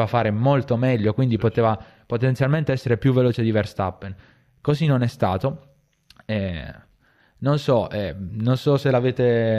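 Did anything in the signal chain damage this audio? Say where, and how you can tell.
No, no signal-chain damage audible.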